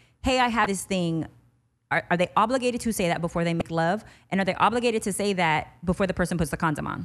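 A speech clip with two short bursts of damaged data in a compressed stream. The first runs from 0.63 to 0.66 s, between "hey I" and "this thing". The second runs from 3.58 to 3.62 s, just after "say that before they". Each lasts about 30 ms and comes through as a chirp, squawk, click or short hole. Here the compressed data itself is corrupt. The decoder misreads those frames, loses sync and hunts for the next valid frame header.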